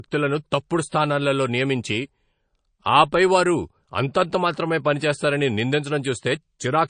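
From start to finish, the speech has no content above 9.4 kHz, and the damage is plainly audible. The treble is sharply cut. Weak detail flickers in and out, giving a watery, swirly texture. This is likely MP3 compression at a low bitrate, around 36 kbps.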